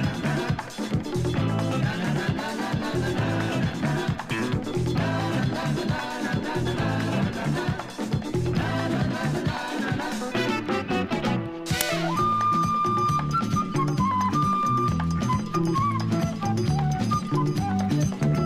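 At 11.81 s the audio breaks into an uninitialised buffer fault: a roughly 5 ms loud crack, where a block was played out before any audio was written to it, so stale memory became samples. Unlike a simple dropout, it is a dense block of junk.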